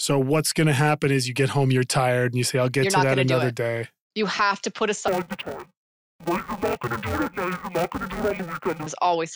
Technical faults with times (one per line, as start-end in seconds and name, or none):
5.08-8.87 interleaved audio read as planar